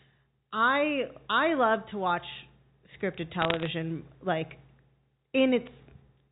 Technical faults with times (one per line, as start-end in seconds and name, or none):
3.42-3.67 bit errors on a digital phone line